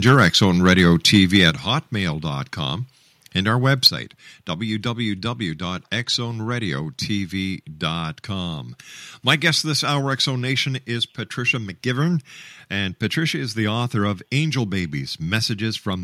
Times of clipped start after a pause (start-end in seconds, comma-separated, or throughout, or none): none